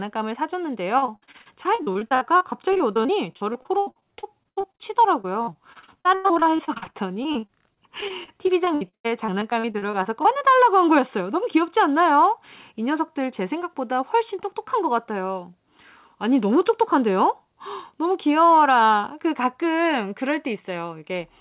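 From 0.98 to 10.42 s, repeated packet loss kept punching holes into the speech, up to 96 ms each. Concealment stretched the last sound over about a quarter of that span, leaving it choppy and robotic. Throughout, the G.711 mu-law call path left nothing above 4 kHz.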